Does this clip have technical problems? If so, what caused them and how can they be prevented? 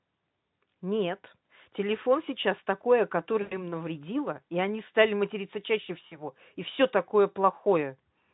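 Yes. VoIP packet loss concealed by the speech codec occurs at 3.41 to 3.68 s and again at 6.07 to 6.18 s. About 100 ms of audio is missing in the first gap, which fits five lost 20 ms frames, and about 40 ms in the second. The decoder fills each hole by repeating its last pitch and spectral envelope at falling gain, so the speech smears into a fading buzz or coloured noise. Because each frame builds on the last, the voice stays thin briefly after packets resume, which is why the first event lasts about 0.27 s. The Speex coding itself leaves little or no audible damage. Prevention: give the voice stream network priority, add forward error correction or redundant frames, and use a larger jitter buffer so late packets are not discarded.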